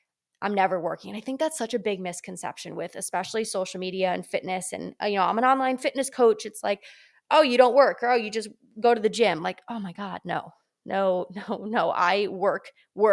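A recording of speech whose signal carries no audible technical faults anywhere in its duration.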